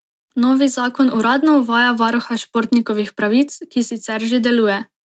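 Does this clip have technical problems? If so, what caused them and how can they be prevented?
No, there are no technical problems to report in this speech clip. Nothing reaches above about 8 kHz, which fits the bandwidth of a normal call path with its microphone processing and Opus coding.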